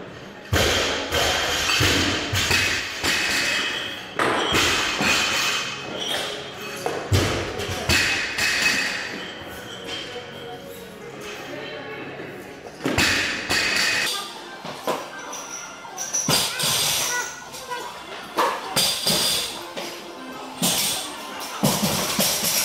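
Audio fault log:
14.07 to 22.65 s, section at the wrong speed: from 14.07 s right through to the end, everything runs about 1.88 times too fast, so it's hurried and shoots up in pitch by around ten semitones at the same moment. Speed and pitch jump together like that because the samples are just being read out quicker, most likely playback or an edit locked to the wrong clock for that stretch.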